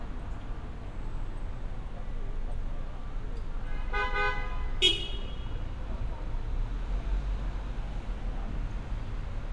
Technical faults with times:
none

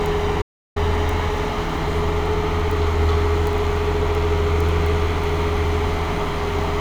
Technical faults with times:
0.42-0.76 audio dropout to silence

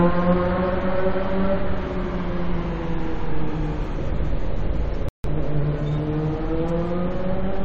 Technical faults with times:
5.09-5.24 rebuffering stall

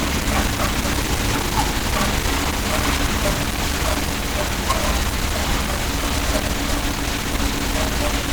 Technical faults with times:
0.00-8.32 Opus compression

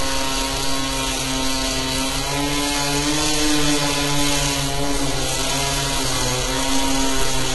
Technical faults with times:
0.00-7.55 HE-AAC compression

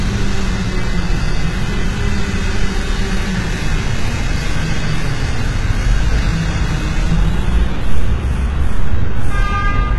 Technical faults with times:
0.00-9.99 HE-AAC compression

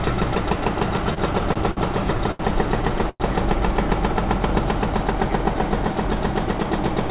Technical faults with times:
1.14-1.79 repeated stalls (stutter)
2.18-2.41 short stall from a late packet
3.10-3.22 call audio freeze

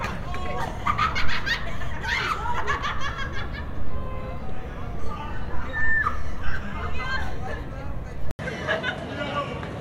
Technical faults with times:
8.31-9.80 input switched to a poorer device

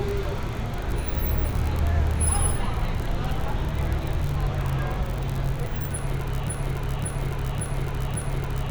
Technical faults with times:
6.48-8.71 broken-record loop

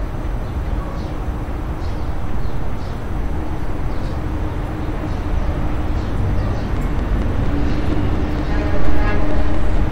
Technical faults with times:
6.77-9.78 train of clicks

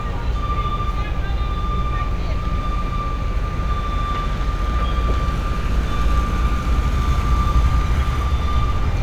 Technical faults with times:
none

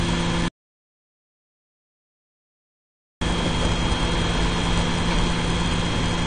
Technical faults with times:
0.00-6.26 AAC compression
0.48-3.21 audio dropout to silence

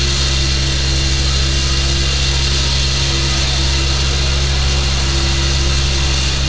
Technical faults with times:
none

